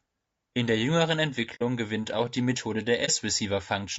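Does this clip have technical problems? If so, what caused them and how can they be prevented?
Yes. Throughout, the speech sounds rough and grainy, with noise between the harmonics and a dull, synthetic top band. This is likely low-delay AAC compression (AAC-ELD) at a low bitrate, around 32 kbps. Its short frames resolve pitch harmonics poorly. A higher encoder bitrate would prevent it.

At 1.55–1.62 s and 3.05–3.10 s, the sound fades smoothly into a soft-edged hole and then a brief dip. This is AAC frame loss with muting: the decoder zeroes the missing frames, and the overlapping windows soften the edges. Using packet-loss concealment or redundant transmission would prevent it.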